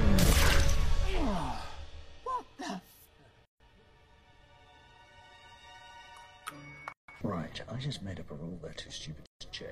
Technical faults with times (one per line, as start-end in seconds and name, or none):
3.45-3.60 gap at a join of encoded pieces
6.92-7.08 gap at a join of encoded pieces
9.26-9.41 gap at a join of encoded pieces